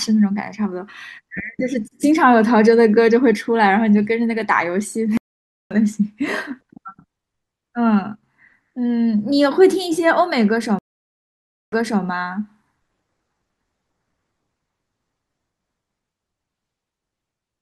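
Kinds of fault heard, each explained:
Stream reconnect: speech cuts to silence twice, resuming first slightly ahead, then 300 ms back, as a dropped connection forced a fresh mid-stream decoder.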